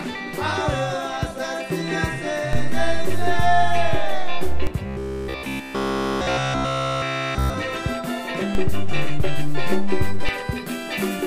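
At 2.53 s a DC step shifts the waveform's zero line to a new offset, which holds until 4.67 s and then steps back. Each jump registers as a low thump, while the sound itself is unaffected. The same DC step recurs from 8.55 s to 10.29 s, with a thump at each edge.

Between 4.86 s and 7.54 s the audio becomes a rigid, metallic buzz at 66.8 Hz. This is robotic sound from repeated short buffers. It likely comes from a segment of about 15 ms being replayed in place of fresh audio, with the repetition running throughout this stretch.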